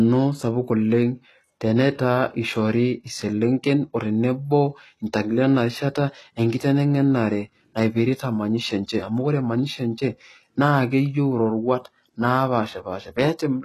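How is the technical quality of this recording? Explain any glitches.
The recording has plainly audible codec damage throughout. The speech carries HE-AAC compression artefacts from start to finish. Nothing sounds above 12.3 kHz. The treble that remains is likely rebuilt by spectral band replication, copied up from lower bands. Its harmonics misalign, so s sounds turn gritty, metallic or lispy. The heavy damage fits a very low bitrate, near 16 kbps.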